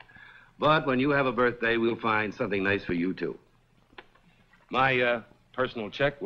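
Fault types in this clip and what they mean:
Short concealed packet loss: at about 1.89 to 1.92 s a 20 ms chunk of the stream didn't reach the decoder in time, so the receiver covered the gap by extending the sound just before it, about 11 ms of synthesized fill, then crossfaded back into the real audio. You hear it as a tiny smear or wobble lasting only a few hundredths of a second.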